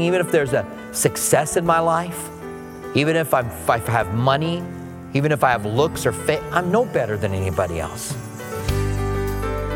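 Nothing stood out as a technical problem on listening to this audio.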